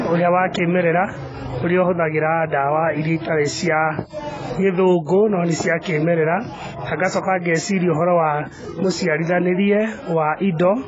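From start to finish the speech is dull and smeared, with a fizzy, warbling edge on sibilants. Heavy AAC compression is the likely cause, and the damage fits a low bitrate near 16 kbps. A spectrogram shows nothing above 7.7 kHz.

At 5.06 to 5.09 s, just before "no nĩ cia kĩmerera", pre-echo puts a short hiss ahead of a sharp attack. Coding noise spread across the transform block leaks into the quiet gap. The waveform shows a low smear about 24 ms long before the onset.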